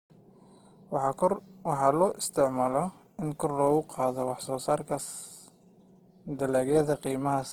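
Opus compression runs through the whole clip, from start to finish. The speech sounds grainy and rough, with tonal parts of the voice turned noisy rather than hollowed out, while the band still reaches up to about 20.2 kHz. The artefacts are plainly audible. This is likely the music (CELT) mode of the codec starved of bits, filling bands with folded or noise content, which fits a low rate near 16 kbps.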